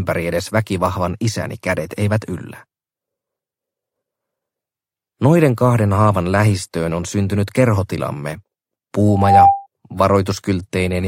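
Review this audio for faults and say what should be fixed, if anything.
Loudspeaker feedback squeal, 9.08 to 9.67 s: a 795 Hz tone swells over about a third of a second to roughly 10 dB above the program as the microphone re-amplifies its own loudspeaker. To prevent it, keep microphones out of the loudspeakers' coverage, lower the monitor gain, or notch out 795 Hz.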